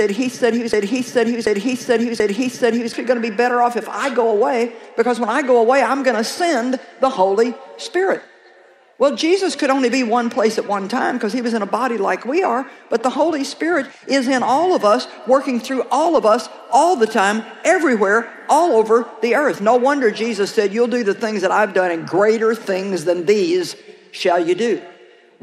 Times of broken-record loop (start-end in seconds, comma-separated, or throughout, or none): 0.00-2.93